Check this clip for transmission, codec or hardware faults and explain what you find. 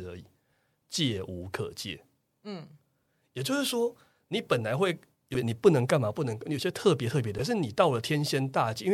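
Damaged data in a compressed stream occurs twice in this speech, at 5.32 to 5.36 s and 7.36 to 7.40 s. Corrupted bytes there make the decoder misread or reject frames, lose sync and hunt for the next frame header, leaving a brief glitch of about 40 ms in the speech each time.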